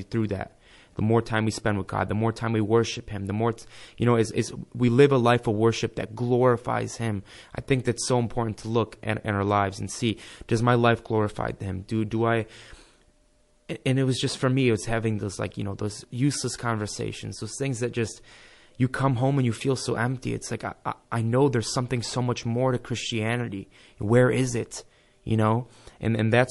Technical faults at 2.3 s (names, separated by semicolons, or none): MP3 compression